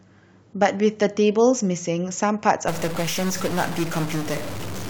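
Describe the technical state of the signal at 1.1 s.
At 1.1 s the speech signal is intact, with no audible dropout, distortion, click or other technical fault at that moment.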